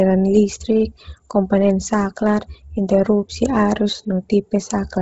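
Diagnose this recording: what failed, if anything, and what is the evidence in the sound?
The codec stage is where this went wrong. All the way through, the speech has nothing above 7.7 kHz, and the top of what's left sounds breathy and grainy, with a noisy fizz where real detail should be. That's heavy Bluetooth LC3 compression, likely from a low-rate LE Audio link. The sound points to something around 16 kbps with 10 ms frames: the encoder drops most of the upper spectrum and fills the gaps with synthetic noise.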